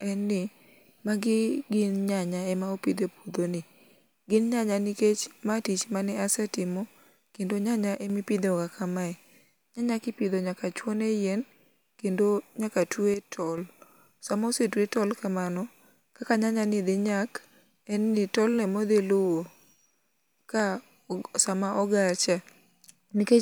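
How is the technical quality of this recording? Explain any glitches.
The speech has two kinds of glitch: four short clicks and two brief level dips.

Dropped samples cause the clicks, at 5.50 s, 14.97 s, 18.59 s and 20.60 s. The first comes between "gin nyanya nikech" and "mae tich". The third comes between "dhi nyak en ni" and "modhi luwo". Each time, a fraction of a millisecond of audio is likely missing. The waveform jumps straight to a later value. Nothing audible is lost, but the jump sounds as a single sharp tick.

One channel drops out twice: from 7.95 to 8.10 s, and from 13.14 to 13.58 s, just after "kendo nyaka". One stereo side likely goes silent for that moment. Heard as mono, the shared sound falls abruptly by about 6 dB, then returns. It sounds like a sudden brief dip in loudness. The second dip lasts longer.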